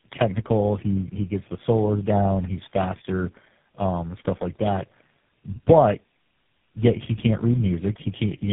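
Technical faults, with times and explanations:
Throughout, tandem speech coding: the speech was decoded and re-encoded several times in a row, each low-rate coder compounding the previous one's damage, so it sounds rough, muffled and warbly. A spectrogram shows nothing above 3.6 kHz and smeared, blotchy harmonics.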